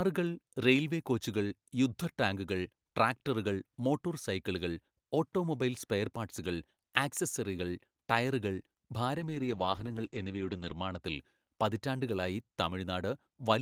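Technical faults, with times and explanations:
9.18–11.07 s, call bitrate drop: the speech turns coarse and watery, and its upper range is lost above about 8 kHz for roughly 1.5 s. The sound points to the encoder falling from around 32 kbps to about 10 kbps after a lowered bandwidth estimate, then recovering.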